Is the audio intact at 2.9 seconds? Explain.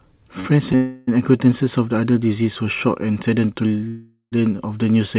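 Yes, the speech at 2.9 seconds is intact, with only the narrow telephone-band sound of the call path, which carries nothing above 4 kHz.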